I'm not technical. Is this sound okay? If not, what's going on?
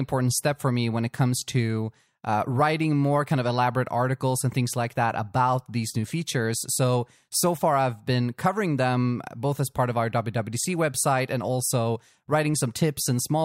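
Yes, nothing in this recording points to a technical problem with how the sound was captured, carried or played back.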